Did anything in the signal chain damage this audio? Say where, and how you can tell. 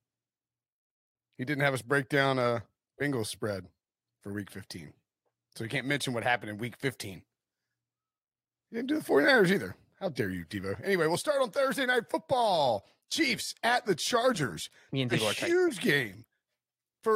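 No, nothing in the signal chain damaged this audio.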